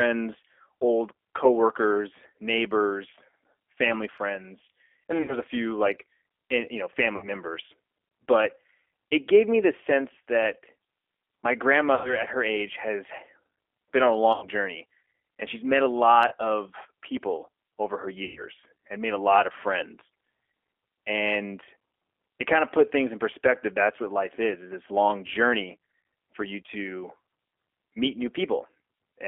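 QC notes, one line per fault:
Throughout: G.729 codec, plainly audible. Speech is confined to the 300 Hz to 3.4 kHz telephone band and rebuilt from a vocal tract filter, pitch predictor and sparse pulses at 8 kbit/s, giving a slightly rough, synthetic texture with nothing above 4 kHz.
5.22–5.36 s, 7.16–7.29 s, 16.28–16.34 s: VoIP packet loss concealed by the speech codec. About 60 ms, 60 ms and 30 ms of audio are missing; the decoder repeats its last pitch and filter with falling gain, so the sound smears into a brief buzzy tone or coloured noise that fades.
11.95–12.23 s, just before "her age has"; 14.33–14.47 s, between "been on a" and "journey and she's met"; 18.24–18.43 s, between "of people over her" and "and made": VoIP packet loss concealed by the speech codec. Longer gaps of about 90, 90 and 120 ms are bridged by an extrapolated, decaying buzzy tone or coloured noise, and speech stays weak or distorted briefly afterwards while the frame-to-frame decoder state recovers.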